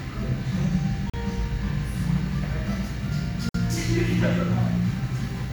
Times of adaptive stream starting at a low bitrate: none

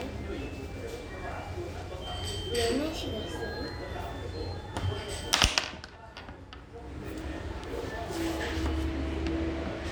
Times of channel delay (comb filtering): 5.57-6.57

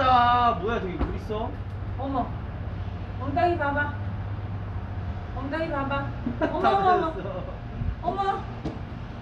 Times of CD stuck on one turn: none

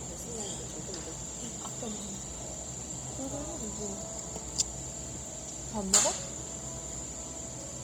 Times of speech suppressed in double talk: none

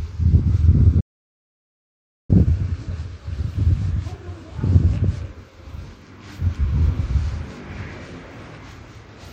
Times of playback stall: 1.00-2.30

